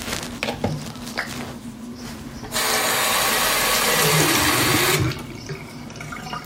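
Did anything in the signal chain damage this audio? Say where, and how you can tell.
No, nothing in this recording of sounds stood out on listening as damage from any stage of the signal chain.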